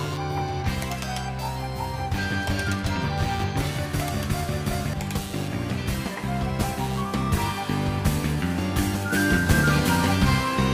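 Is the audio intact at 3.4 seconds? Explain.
No. At 3.4 s the clip carries computer activity noise, which runs through the whole recording rather than only at that moment. Changing load on the processor, graphics card or mouse shifts the ground shared with the audio circuit, so a buzzing, chirping or scratching layer pulses at around 150 Hz, some 25 dB below the wanted sound, rising and falling with the computer's activity rather than with the audio. On a spectrogram this appears as stacked lines spaced about 150 Hz apart, swelling independently of the sound. On the waveform it shows as a ragged fuzz, most visible in the quieter gaps.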